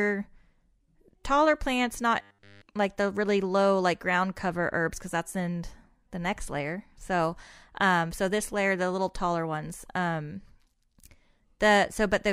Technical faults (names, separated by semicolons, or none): robotic sound from repeated short buffers